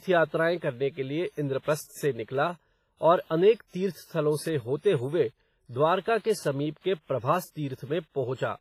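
Throughout the speech, heavy codec damage, likely from WMA compression near 24 kbps, rings and washes. Unlike steady noise, its hiss breathes with the signal, and nothing sounds above 15.3 kHz.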